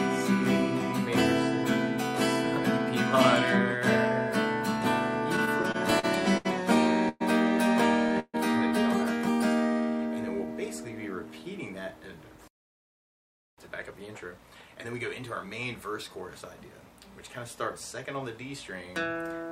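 Repeated stalls (stutter) run from 5.36 to 6.47 s. The audio catches seven times, with the longest hold about 75 ms. The receiver's jitter buffer kept running dry because packets arrived late or more slowly than playback consumed them, and each time it stretched the last sound until fresh data came in. Roughly 187 ms of fill, about 17 percent of that span, was inserted with nothing lost, so the passage drags and judders.

Call audio freezes follow at 7.09 to 7.22 s and at 8.20 to 8.36 s. The first sustains the preceding sound as it fades for 115 ms. The second holds for 140 ms and decays into about 30 ms of silence. The likely cause is packets held up in transit that emptied the buffer. Playback then resumes exactly where it stopped, so each freeze adds a gap and pushes the delay back by the same 115 and 140 ms.

A jitter buffer slow-down spans 9.50 to 10.48 s. Running at about 89 percent speed with unchanged pitch, the audio sounds drawn out. 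The receiver repeated single pitch periods and fragments of pauses over and over to rebuild its reserve, adding 115 ms in total.

A jitter buffer speed-up covers 12.23 to 16.43 s at about 108 percent speed, again at the same pitch, so this stretch sounds hurried. Having accumulated more audio than it targets, the buffer trimmed short pieces of one or a few pitch periods again and again, removing around 0.3 s overall to bring the delay back down.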